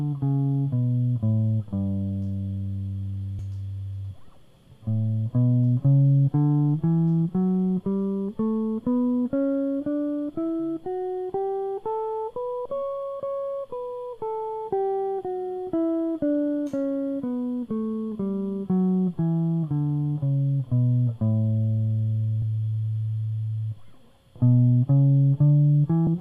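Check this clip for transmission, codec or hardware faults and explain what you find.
The music has four places where compressed frames are skipped, at 3.39, 12.65, 22.42 and 26.07 s. Each time, whole 24 ms frames go missing, so the music jumps ahead by a fraction of a second.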